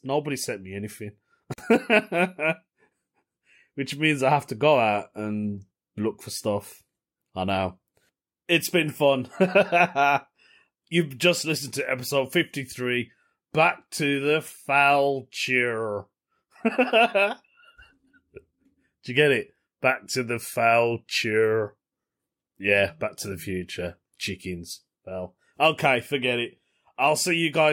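Separately encoded pieces of this speech recording were joined without trimming the encoder delay and final-frame padding, leaving a gap at a join of encoded pieces: a gap of about 45 ms from 1.54 to 1.58 s, right after "sent me anything", with smeared edges before the speech resumes where it stopped.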